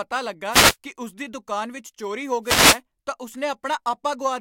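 At 0.49 to 0.76 s, before "ਕਿ ਉਸ ਦੀ ਦੁਕਾਨ", a wireless microphone noise hit sweeps over the speech. It returns at 2.43 to 2.80 s, between "ਦੁਕਾਨ ਵਿੱਚ ਚੋਰੀ ਹੋ" and "ਤਾਂ ਉਸ". The radio signal faded, so receiver noise rose. Each sounds like a brief static swish.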